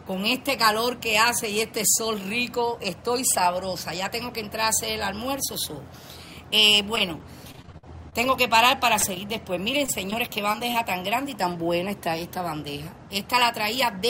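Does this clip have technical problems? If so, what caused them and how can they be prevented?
Yes. Repeated packet loss (robotic sound) runs from 6.95 to 8.28 s and again from 9.79 to 10.76 s. Audio kept arriving late or not at all, and the receiver patched each hole, the longest about 52 ms, by extending the preceding sound. The result is choppy, with pieces missing. A larger jitter buffer and a steadier, less congested network path would prevent it.

Short concealed packet loss occurs at 8.99–9.04 s and 9.14–9.17 s. In each case roughly 20 ms of audio never reached the decoder in time. The gap was bridged by continuing the previous sound and then blending back in, which leaves a brief smear or wobble. Forward error correction or redundant packets would cover such isolated losses.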